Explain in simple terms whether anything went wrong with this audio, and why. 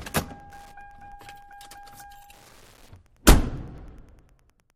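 Wi-Fi interference runs throughout: a steady tick every 102.4 ms, ten per second, as the audio circuit picks up a nearby Wi-Fi radio's beacon.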